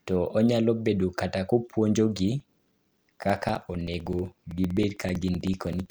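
Speech, and from 2.40 s to 5.86 s you get periodic USB or driver dropouts: tiny gaps of around 4 ms, filled with silence, every 64 ms. That's a steady ticking at about 15 per second, probably from something repeatedly stalling the bus or driver.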